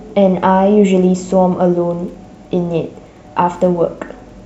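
Speech runs through the whole clip over a faint, steady ticking about ten times a second: Wi-Fi interference, where a nearby radio's beacon, sent every 102.4 ms, is rectified by the audio circuit and turned into clicks. The ticks sit very low, roughly 45 dB under the speech, so they are clearest in pauses. On a spectrogram they show as thin vertical broadband lines evenly spaced about 0.1 s apart; a zoomed waveform shows matching small spikes.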